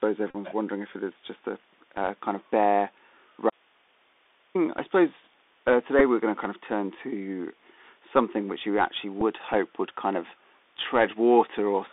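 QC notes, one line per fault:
throughout: Bluetooth CVSD headset codec. The sound is boxed into a narrow band, roughly 250 Hz to 3.6 kHz, with a grainy hiss underneath and scratchy sibilants. A one-bit adaptive-step coder at 64 kbps cannot follow fast, loud high-frequency movement and has nothing above 4 kHz.
0.30–0.36 s, 5.99–6.02 s, 9.21 s: Bluetooth headset packet repeated. The first event is a brief steady buzz near 267 Hz lasting about 37.5 ms, which fits roughly ten lost packets. The later two are shorter buzzing runs of 11.2 ms and 7.5 ms. Lost packets were replaced by the previous 3.75 ms packet decoded again.
3.50–4.55 s: audio dropout to a faint residue. The signal cuts off abruptly for about 1.05 s, leaving only hiss roughly 40 dB below the normal level, then snaps back mid-flow. Because the downstream path stayed live, the likely cause is the wanted signal being lost upstream rather than a pause.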